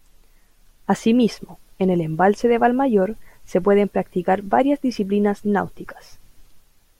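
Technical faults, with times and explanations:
No technical faults detected in the speech recording.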